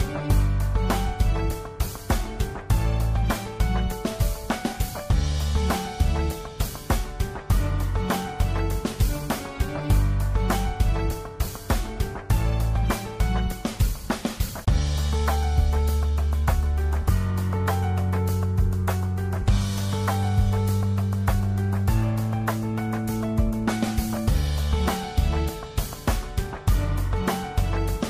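No technical faults are audible anywhere in the recording.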